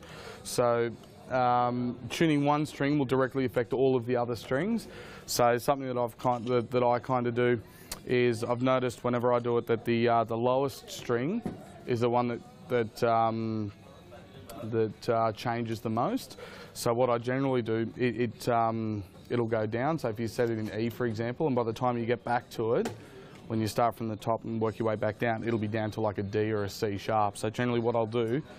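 No technical faults can be heard anywhere in the recording. The sound runs without any break, glitch or disturbance that would point to a problem in the chain.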